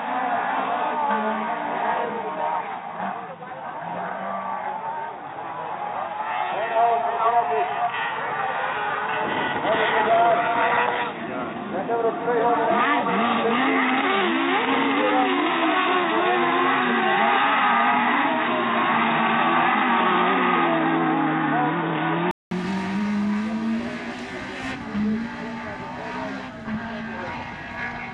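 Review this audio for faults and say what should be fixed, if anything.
From 0.0 to 22.51 s the audio is band-limited, with nothing above 3.8 kHz, which gives it a dull, boxy character. At 22.51 s there is a 200 ms silence, after which the full bandwidth returns along with a level change of about 5 dB and a different noise floor. Before the switch, that floor sits roughly 45 dB below the signal. The likely cause is an input switched to a poorer device during recording. To prevent it, lock the recording input to the intended microphone and disable automatic device switching.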